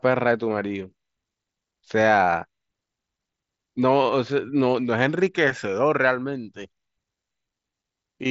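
No technical faults can be heard in the speech, which arrives over a Bluetooth mSBC headset link with nothing above 7.7 kHz and only the light graininess that this codec leaves on louder passages.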